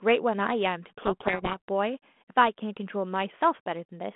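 From 0.88 to 1.58 s harsh distortion buries the speech: a codec payload misread, with the G.726 decoder taking each code word's bits in the wrong order.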